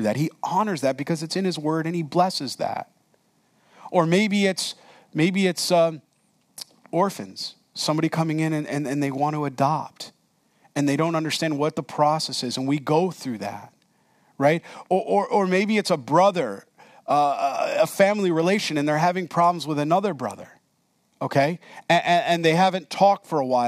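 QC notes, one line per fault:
Nothing stood out on listening to this speech recording.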